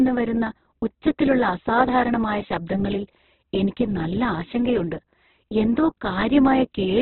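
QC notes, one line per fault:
Throughout, Opus compression: nothing reaches above 4.2 kHz, and the speech is heavily damaged, rough and grainy, with noisy texture filling the spectrum rather than the watery swirl and gaps of MP3. The likely cause is Opus in its music mode at a bitrate near 8 kbps, which keeps each band's energy but fills it with folded or noise-like content and narrows the bandwidth. A plain low-pass would cut the top without this graininess.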